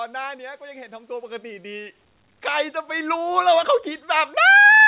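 Speech heard through a narrowband call path, with nothing above 4 kHz, shows automatic gain rising from 0.58 s to 4.41 s, lifting the level by about 14 dB. Unlike a talker moving closer, the background noise swells in step with the voice, showing the gain control itself turned up.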